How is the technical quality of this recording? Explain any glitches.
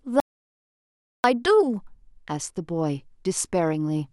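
The recording has one clear glitch: an audio dropout to silence near the start of the speech. From 0.20 s to 1.24 s, roughly 1.04 s, the signal stops completely. The speech cuts off abruptly, leaving silence with no room tone or background, then resumes mid-flow. The likely cause is a brief loss of input, such as a disconnected device, a failed link or an accidental mute, while recording continued and wrote silence. Whatever was spoken during that second is gone.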